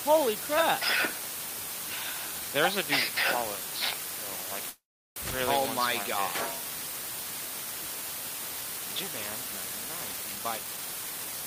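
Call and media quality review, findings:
Low bit depth with dither, whole clip: constant even hiss, nearly as loud as the signal itself, with no grainy distortion riding on it. The hiss fits a signal reduced to about 4 bits with dither added before rounding. The dither turns what would be harsh quantisation distortion into steady broadband noise, so the fault is heard as a noise floor rather than as crackle or buzz.

Call audio freeze, 4.69–5.18 s: the last sound is stretched into a decaying buzz or hiss that fades to silence for about 350 ms, then the audio resumes where it stopped. The likely cause is delayed packets emptying the receive jitter buffer, with the receiver concealing the gap. Nothing is lost, but playback now runs about 0.47 s later than before.

Jitter buffer speed-up, 10.35 s to end: the audio plays hurried at 126% rate with pitch unchanged. The receiver trims repeated short pitch-period slices, roughly 0.3 s in total, to drain an overfilled buffer. 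This fits a backlog of delayed packets arriving together.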